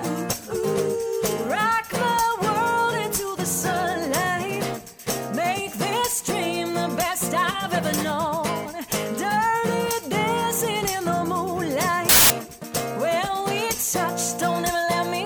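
Samples built from the wrong bytes appear from 12.09 to 12.30 s, a burst lasting about 0.21 s. Over that stretch the reader assembled each sample from mismatched bytes, whether shifted by one, swapped in order or read at the wrong alignment. The rapidly changing low-order bits end up as the dominant part of every value, so the original sound is replaced by loud, harsh broadband noise.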